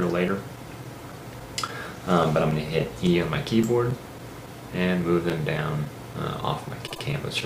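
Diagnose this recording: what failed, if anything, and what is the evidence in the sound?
At the codec or storage stage, a run of compressed frames was written or delivered more than once, a repeated frames fault. The decoder plays the same 78.4 ms block three times in a row between 6.86 and 7.02 s, a length that fits a block of about three codec frames. The two extra plays turn that moment into a short stutter, and the audio runs 156.7 ms longer than the original.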